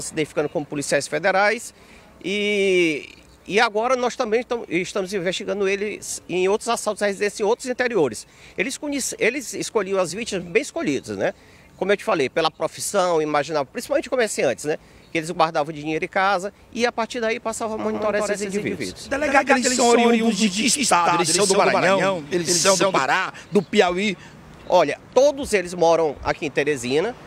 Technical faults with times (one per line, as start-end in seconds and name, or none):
17.84-23.04 doubled audio track